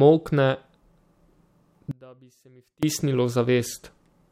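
At 1.91 s the speech drops out abruptly for about 0.91 s, returning at 2.83 s. It is an audio dropout to a faint residue: the signal was likely lost while the path stayed live, leaving only faint sound roughly 30 dB down. The hard edges and lingering trace set it apart from a pause or fade.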